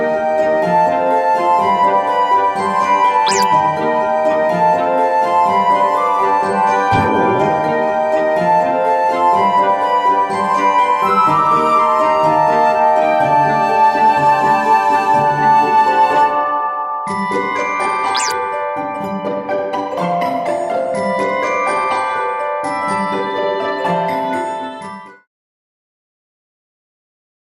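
Nothing stood out on listening, apart from the gentle fade-out toward the end, which finishes at about 25.3 s.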